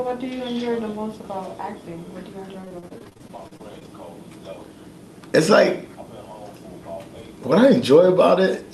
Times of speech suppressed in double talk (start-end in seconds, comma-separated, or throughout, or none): none